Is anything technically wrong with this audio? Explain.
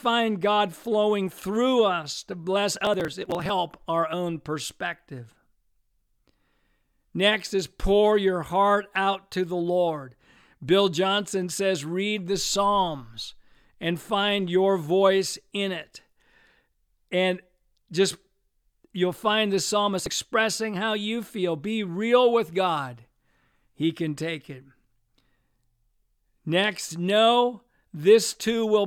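Yes. Processor overload crackle occurs twice, from 2.72 to 3.50 s and from 19.99 to 20.12 s. The processor is falling behind and missing the deadlines for its small audio buffers, which sound like roughly 10 ms each, many in a row. Each missed buffer is skipped rather than filled, leaving short hard-edged gaps in the speech. Strung together, they form a gritty, tearing crackle over the sound that stops once the load eases.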